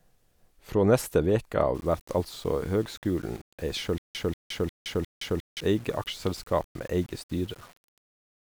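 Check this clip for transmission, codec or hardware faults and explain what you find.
Two faults stand out in this speech clip.

From 1.75 s to the end there is low bit depth without dither. The audio was likely rounded to very few levels, with no added noise to break up the steps. The grit fits roughly 7-bit rounding. The error tracks the signal, so quiet passages turn grainy and the softest parts sputter. The distortion sits only about 30 dB under the speech and changes with it.

From 3.98 s to 5.60 s there is a stutter with silent gaps. The cause is likely a stalled stream replaying its last fragment on each retry. A burst of 188.5 ms repeats four times. Each burst is followed by about 167 ms of digital silence. That gives a steady cycle of about 355 ms. The speech that should fill this span is lost.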